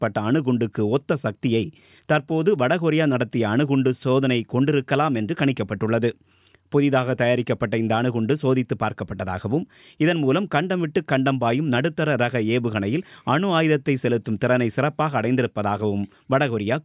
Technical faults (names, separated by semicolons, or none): none